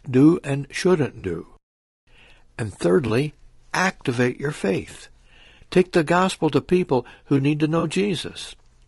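Speech sounds rough and grainy throughout, with noise filling the gaps between harmonics, likely from low-delay AAC compression at a low bitrate, around 32 kbps; on a spectrogram the harmonics look smeared. Brief smeared, noisy patches at 1.19 to 1.25 s after "do and", at 3.07 to 3.10 s, and at 7.79 to 7.84 s after "people who need to" are AAC frame loss with concealment, lasting about 40, 20 and 40 ms, and they show as blurred vertical strips of spectrum.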